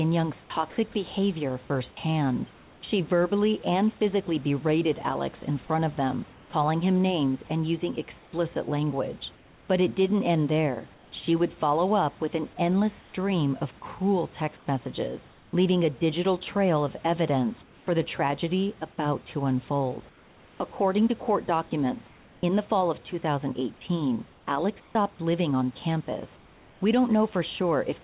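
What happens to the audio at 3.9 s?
Nothing goes wrong at 3.9 s: the speech carries on intact through that moment, with only the steady telephone-band sound of the call path and the faint room noise beneath it.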